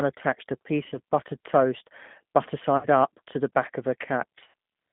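G.729 codec damage runs through this entire speech clip. The sound is confined to a narrow telephone band of roughly 150 Hz to 3.5 kHz, and the 8 kbit/s pulse-and-filter reconstruction is plainly audible as a rough, slightly synthetic grain. VoIP packet loss concealed by the speech codec occurs at three points: 0.84 to 0.98 s, after "attached a" and before "buttered toast butter"; 2.77 to 2.87 s, after "buttered toast butter" and before "up to the back"; and 4.44 to 4.54 s, after "to the back of". At each gap about 60 to 70 ms of signal is missing. That fits six or seven 10 ms frames, scattered in the first and last cases. The decoder stretches its last pitch and filter into a fading buzzy tone or coloured noise, and the voice stays weak or distorted briefly afterwards.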